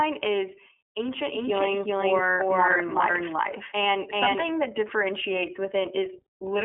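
From start to finish the speech has been through the iLBC codec, and you can plainly hear it. The band stops near 3.6 kHz, with the line band sitting around 300 Hz to 3.4 kHz, so everything sounds thin and boxy. Each frame is coded on its own, and the slightly gritty, synthetic edge fits the 30 ms frame mode at about 13.3 kbps. Sibilants and breaths lose their air, and the speech has that rough VoIP texture.

From 1.34 s to 4.44 s there's a doubled audio track: a second copy of the speech trails the first by roughly 400 ms at about the same level. Because it's the same full-band signal with no decay or room colour, it comes across as a second talker shadowing the first rather than an echo. It cuts in and out abruptly at those edges, most likely because the signal was captured twice through a slower parallel path.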